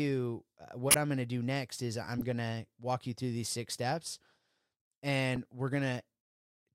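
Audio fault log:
0.86–0.95 s, 2.18–2.22 s, 5.36 s, corrupt frame decoded: damaged compressed frames were played as received, misplacing energy across frequencies as short chirp-like bursts. The first spans about seven frames, peaks near -10 dBFS and adds 20 ms. The others are brief blips near -25 dBFS.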